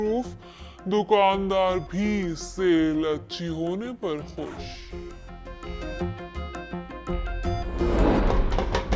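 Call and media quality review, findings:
Wrong sample rate, throughout. Sound is slowed to 0.667x speed and pitched down 7.0 semitones, both shifting together. Probable component: playback or resampling stage. Ratio fits 24 kHz material clocked out at 16 kHz with no rate conversion.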